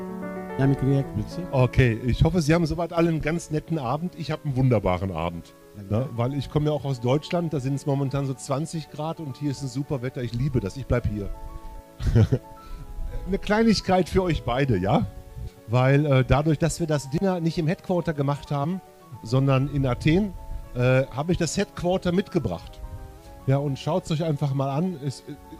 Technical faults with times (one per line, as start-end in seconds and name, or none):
2.97-3.06 sudden gain jump
4.32-5.28 drift correction step
16.63-18.45 drift correction step